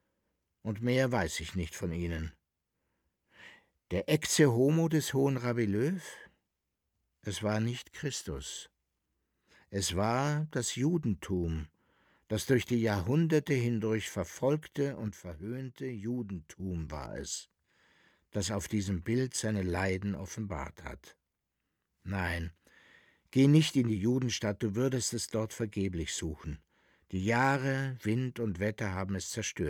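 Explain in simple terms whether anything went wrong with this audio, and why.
A sudden gain jump happens at 15.08 s. The sound and its background noise both drop quieter in the same instant, then snap back up at 16.60 s. The likely cause is a digital volume setting that was switched instantly instead of being faded smoothly.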